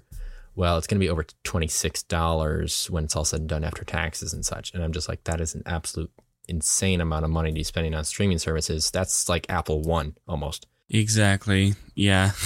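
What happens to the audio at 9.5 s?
At 9.5 s, right after "streaming services that's like" and before "apple one almost", two chunks play out of order. A 10 ms chunk arrives one chunk late and plays after the one meant to follow it. Nothing is lost. The swap leaves a brief jumbled moment with hard joins.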